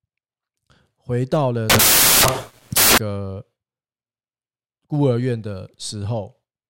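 Samples built from the wrong bytes hit this speech clip from 1.70 to 2.98 s: misassembled bytes push each sample's rapidly changing low bits into the high bits, producing loud, harsh broadband noise in that stretch.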